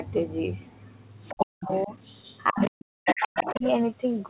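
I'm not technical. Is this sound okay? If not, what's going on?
No. Two things go wrong in this speech.

First, the other side's voice leaking through. A second voice creeps in at 1.28 to 1.45 s, 1.63 to 1.85 s, 2.05 to 2.38 s, 2.6 to 2.71 s and 3.05 to 3.7 s. The early scraps are faint. The last two are nearly as loud as the main talker. The likely cause is the other person's voice playing from a loudspeaker and reaching the microphone. The echo remover didn't catch all of it.

Second, speech suppressed in double talk. The main voice sinks almost to silence in pieces between 1.34 and 1.92 s, and again between 2.51 and 3.64 s. The second dip lasts about a second. The likely cause is both people talking at once. The echo remover couldn't tell them apart, so it turned everything down.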